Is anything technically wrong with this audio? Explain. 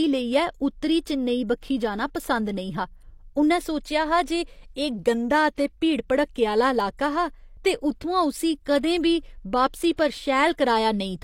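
Yes. At 5.56 s and 9.97 s, a short hiss smears in just before sharp speech onsets; this pre-echo comes from transform-codec quantisation noise spreading about 17 to 18 ms ahead of each attack.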